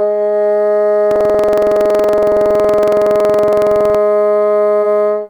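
From 1.07 to 3.96 s the music has buffer tearing: writer and reader have slipped, so a sliver of each buffer replays audio about a tenth of a second old. Its hard joins make a steady 21.5 Hz rattle, fitting a 2048-sample buffer, unlike the silent gaps of dropouts.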